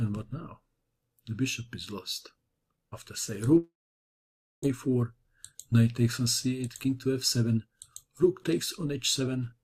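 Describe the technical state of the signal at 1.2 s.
At 1.2 s the signal is intact, with no technical fault present at that moment.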